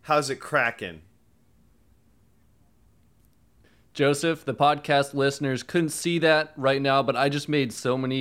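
No technical faults can be heard anywhere in this recording.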